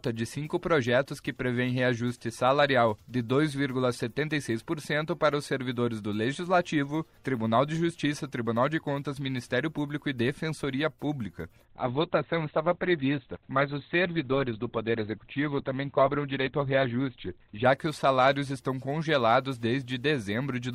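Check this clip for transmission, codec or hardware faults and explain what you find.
There's one problem: an adaptive stream dropping to a lower bitrate. From 11.65 to 17.65 s the quality falls off suddenly, with no gap in the audio. Nothing comes through above 4.5 kHz, and the remaining detail gets that smeary codec texture. The connection likely slowed, so the player switched to a much leaner encode; the sound points to Opus stepping down from around 64 kbit/s to roughly 12 kbit/s. At 17.65 s it snaps back to full quality.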